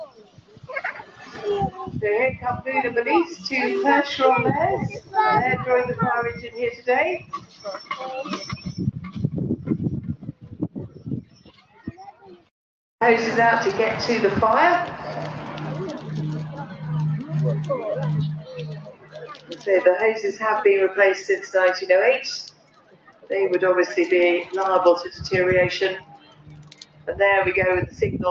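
A noise suppressor applied to music or sounds runs through the whole clip. It was built for speech, so it treats steady tones, ambience and reverb as noise and pulls them down while attacks pass. The level swings by around 15 dB as it engages and releases. On a waveform the envelope looks pumped, with onsets intact and sustains dipping. A spectrogram shows held components and tails fading early. The call microphone processing leaves nothing above 8 kHz, which is expected.

The sound cut by the noise suppressor comes in seven stretches. The first is at 0.05–3.47 s, down about 17 dB. Then come 4.93–5.14 s (about 14 dB), 6.35–12.5 s (about 18 dB, the longest and deepest), 16.67–16.82 s (about 7 dB), 18.39–20.41 s (about 16 dB) and 22.5–23.31 s (about 17 dB). The last runs from 24.44 s to the end, also about 17 dB. In each stretch the sustained or decaying material sinks and its decay is truncated. 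The waveform shows hollowed regions between transients, and on the spectrogram the energy gaps out across the band.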